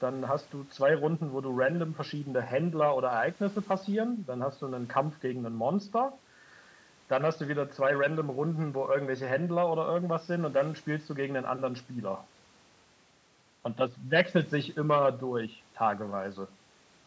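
No technical faults are audible.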